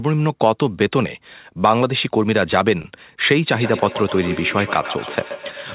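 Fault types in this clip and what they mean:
Short concealed packet loss: Around 2.82 s, roughly 20 ms of audio is missing and patched over with a brief smear rather than silence, unlike a true dropout.
Feedback echo between two devices: From 3.53 s, the speech returns about every 150 ms, peaking about 11 dB below it, as distinct ringing repeats rather than smooth room reverberation.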